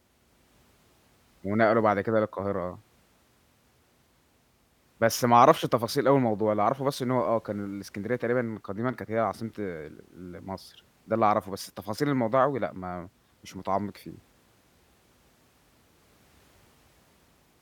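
Speech, with no audible faults.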